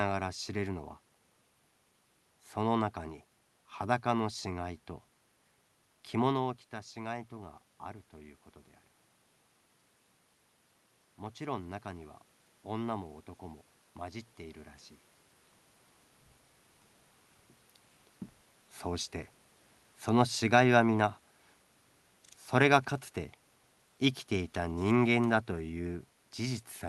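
A speech recording in which, from 11.16 s to 14.79 s, the voice and the room noise behind it swell together by about 4 dB over more than three seconds. That joint, gradual lift is automatic gain rising: the gain control judged the input too quiet and slowly raised its gain, lifting everything it hears rather than just the talker. The level changes near 6 s and 15 s come from the talker moving relative to the microphone.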